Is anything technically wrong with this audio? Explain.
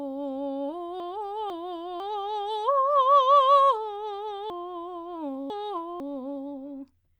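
Yes. Chunks out of order occur at 1.0–2.0 s and 4.5–6.0 s: a 500 ms chunk arrives late, one chunk behind, then two behind, so the music jumbles at three hard joins each time. Unlike a dropout or repeat, nothing is missing or doubled.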